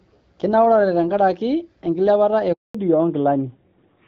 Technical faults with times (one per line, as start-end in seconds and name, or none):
2.52-2.74 handover gap
2.74-4.07 fallback to narrowband